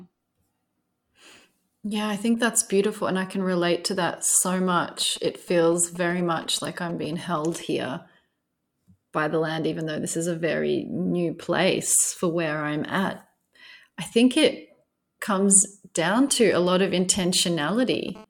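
Speech, with a nearby 2G phone getting into the audio. Right after "can relate to that", from 4.55 to 7.62 s, and again after "i think it comes", from 16.21 to 18.10 s, you get GSM signalling bursts: galloping clusters of ticks and short 217 Hz buzzes, roughly 20 dB under the speech, as the circuit rectifies the phone's handshake pulses. Then at 18.15 to 18.25 s it switches to a brief, steady GSM phone buzz, a raspy 217 Hz tone full of harmonics about 21 dB down, as the handset starts transmitting in bursts 217 times a second for a call.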